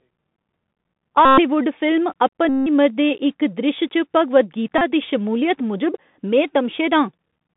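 Speech carried over a Bluetooth CVSD headset codec at 64 kbps throughout: narrowband 150 Hz to 3.6 kHz, granular hiss, scratchy sibilants and plainly audible slope-overload distortion. Bluetooth headset packet repeats produce a steady 267 Hz buzz at 1.25–1.40 s, 2.49–2.68 s just before "दे इक", and 4.78–4.82 s before "दी शमूलियत", as lost packets are replaced by replaying the last one.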